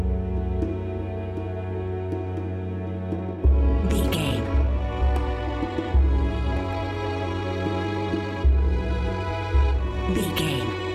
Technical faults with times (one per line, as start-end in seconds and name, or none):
3.13-10.94 time-stretched section